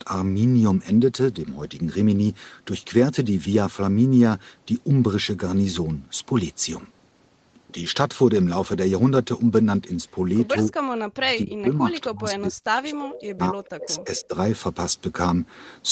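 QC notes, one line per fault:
10.68–14.35 s, speech suppressed in double talk: Over this span the speech sinks in level repeatedly, around three seconds in all, with the deepest dips about 40 dB down. The likely cause is an echo canceller that, with both ends talking at once, could not tell the near talker from loudspeaker echo and attenuated everything. On a waveform the envelope collapses in ragged chunks; on a spectrogram the energy fades unevenly within a band that ends at 8 kHz here.
13.98–14.04 s, echo leak: A brief, faint copy of earlier speech surfaces, arriving about 263 ms behind the original and roughly 20 dB quieter, lasting only about 60 ms. It is likely residual loudspeaker pickup on one side that the echo canceller failed to strip before sending it back. On a spectrogram it shows as a weak repeat of harmonic structure within the suppressed span; the waveform shows a small, low-amplitude burst.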